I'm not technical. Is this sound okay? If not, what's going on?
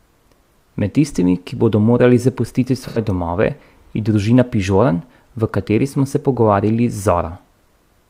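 No. Between "ki bodo morali zapustiti" and "domove je družina" (2.88–2.98 s), there's a brief smeared, noisy patch: AAC frame loss with concealment, where the player patched a short gap in the compressed audio.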